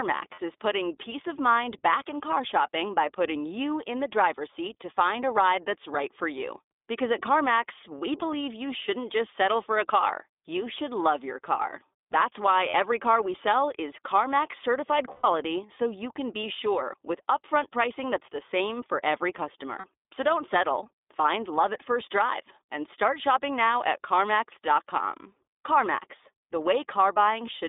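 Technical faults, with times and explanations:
Throughout, iLBC codec: the speech runs through a narrowband VoIP codec at 15.2 kbps in 20 ms frames, each coded on its own, with the line passing roughly 250 Hz to 3.6 kHz. Everything above that is gone, and the voice sounds plainly rough and synthetic.
0.34 to 0.40 s, 12.70 to 12.75 s, 15.12 to 15.26 s, 19.78 to 19.86 s, lost iLBC frames: packets dropped for 40, 40, 120 and 60 ms, before "car we sell is", before "so you can be" and after "the same for every". The decoder repeats the last pitch cycle mixed with noise, giving a brief held buzzy vowel, and the voice recovers at once.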